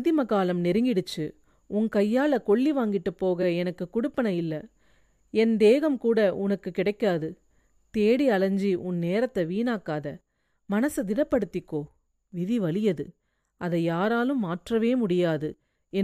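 Repeated frames occur at 3.42 to 3.44 s. A 23.2 ms block of the compressed speech stream was delivered twice, so the decoder plays that same slice again before moving on. The length fits a single codec frame, such as a 1024-sample frame at 44.1 kHz. The result is a brief stutter, a tiny hiccup where the sound seems to catch and restart. The clip grows by 23.2 ms, and everything after that point arrives that much later.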